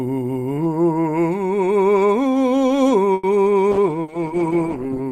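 Call audio freeze, 3.13 to 3.26 s: the music stops moving forward and the last sound is stretched into a fading buzz or hiss for about 100 ms, then the music picks up exactly where it halted, with nothing skipped. The cause is likely a stall in packet delivery that drained the jitter buffer, so the receiver had to improvise filler until the late packets arrived, leaving the playback about 100 ms further behind than before.

Call bitrate drop, from 3.75 s through to the end: the encoder's budget falls from 48 kbps to 13 kbps and stays there for the final 1.37 s. With roughly a quarter of the bits, Opus quantises the music far more coarsely and trims away the upper frequencies, so the sound turns muffled and watery, with a rough, smeared texture.

Burst of packet loss, 4.02 to 4.11 s, inside that low-bitrate stretch: a run of packets never arrived in time to be played. The receiver held the last sound for about 60 ms as a fading continuation, then jumped ahead. 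Unlike the earlier freeze, the music resumes further on, so about 60 ms of the music is simply gone, heard as a hiccup and skip in the flow.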